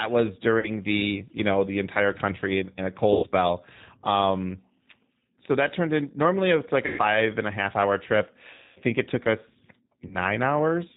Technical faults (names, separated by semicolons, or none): G.729 codec; VoIP packet loss concealed by the speech codec